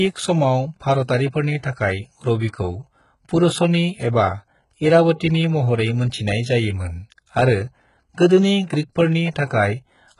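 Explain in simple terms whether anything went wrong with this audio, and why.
Throughout the speech, s sounds come out gritty and lispy, with nothing above about 11.1 kHz. This is likely HE-AAC compression at heavy settings: the treble isn't kept but rebuilt by copying lower frequencies upward, so it sounds bright yet wrong.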